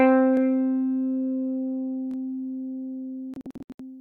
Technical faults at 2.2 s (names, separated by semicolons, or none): repeated buffer